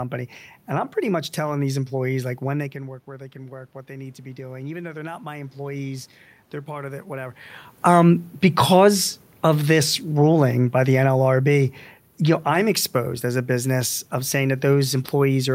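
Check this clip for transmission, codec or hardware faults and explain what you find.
One system fault is audible, an automatic gain rising episode, alongside changes that come from the recording itself.

From 2.72 to 6.05 s, between "employees like when they" and "they're part of it", automatic gain rising follows a roughly 15 dB input drop as the talker moves back slightly earlier. The control slowly adds about 7 dB, so voice and room noise swell together. A talker returning would lift only the voice.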